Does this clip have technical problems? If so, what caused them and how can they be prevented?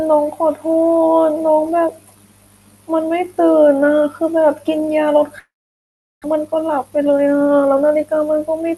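Yes. From 5.39 to 6.26 s there is a long network dropout, likely from packets that never arrived. The receiver stretches the last sound into a fading buzz, then about 0.74 s of near silence. A spectrogram shows smeared harmonics dissolving into an empty band, and the waveform flattens. About 0.6 s of speech is lost outright. A more reliable network path, or forward error correction and redundancy in the call codec, would prevent this.

From 6.34 to 8.14 s a jitter buffer speed-up follows. Audio that piled up after the gap is played about 12% fast, with short pieces of one or a few pitch periods repeatedly cut to recover roughly a fifth of a second of delay. Speech sounds hurried but keeps its pitch. On the spectrogram, harmonic spacing stays the same while syllables become compressed in time. The waveform shows small splices between periods. A steadier network, or a jitter buffer that drains its excess more gradually, would prevent this.

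Throughout, the call path limits content to below about 12 kHz, which fits Opus at around 40 kbps.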